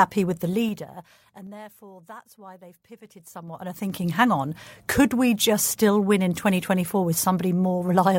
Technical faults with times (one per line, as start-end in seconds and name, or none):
0.30-1.58 zipper noise
2.99-4.14 zipper noise